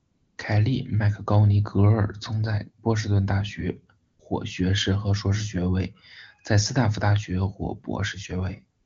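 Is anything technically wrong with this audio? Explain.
Yes, AMR comfort noise appears at 0.00–0.37 s before "凯利", 4.05–4.19 s between "士顿大学" and "获学士和", and 8.79–8.85 s. Speech frames stopped there, so the receiver synthesised a smooth, steady noise in place of the real background. The wideband coding itself sounds clean, consistent with a high AMR-WB rate.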